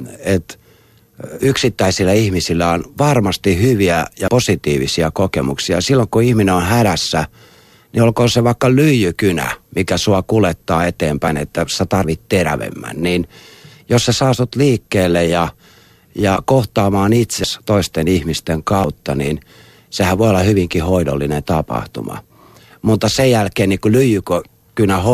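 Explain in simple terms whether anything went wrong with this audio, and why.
Yes, something went wrong. The speech jumps forward seven times, at 1.4, 4.28, 11.28, 12.04, 16.36, 17.44 and 18.84 seconds. Each jump comes with no gap, as if a tiny piece was snipped out. The longest skip comes between "ja kohtaamaan" and "toisten ihmisten". This is likely a dropped buffer (overrun). The recording software fell behind, so small chunks of sound were overwritten and lost.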